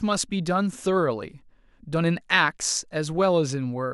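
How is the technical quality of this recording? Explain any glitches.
No glitches can be heard anywhere in the recording, and the signal stays continuous and intact throughout.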